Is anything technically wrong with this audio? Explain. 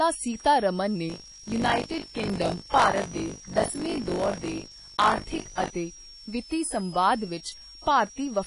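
Yes. Three faults are audible in this speech.

A switching supply whistle runs throughout. It is a high tone near 5 kHz, wandering between 5.04 and 5.85 kHz, about 20 dB below the speech. It comes from a switching power supply running in an audible burst mode or beating with another supply. Its pitch drifts as the load shifts.

Codec damage is plainly audible throughout. Nothing is present above 10.6 kHz. The texture is dull and smeared, with a warbling, fizzy edge on sibilants. This likely comes from AAC-LC at a low rate, which fits 32 kbps. The coder drops high frequencies to save bits.

Buffer tearing runs from 1.08 to 5.70 s. The writer and reader of a ring buffer have slipped past each other. About a fifth of each buffer repeats audio from roughly 40 ms earlier, with hard joins. The result is a robotic 50 Hz buzz, heard only while sound is present.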